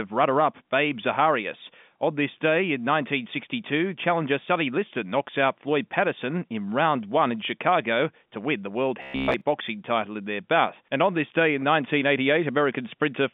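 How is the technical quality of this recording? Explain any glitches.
The speech carries one glitch, heard against a telephone-band G.711 A-law line that passes roughly 150 Hz to 3.6 kHz, with nothing above 4 kHz.

Robotic sound from repeated short buffers, 9.02 to 9.41 s: speech turns into a rigid, metallic buzz at 66.7 Hz, likely from a 15 ms buffer replayed over most of that stretch while the real audio is skipped.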